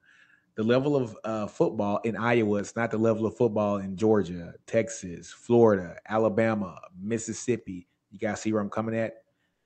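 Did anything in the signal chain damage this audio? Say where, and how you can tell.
Yes, in call processing: from 9.53 to 9.65 s the background becomes smooth, featureless comfort noise, about 1 dB quieter, likely from Opus DTX halting transmission while the receiver synthesises filler.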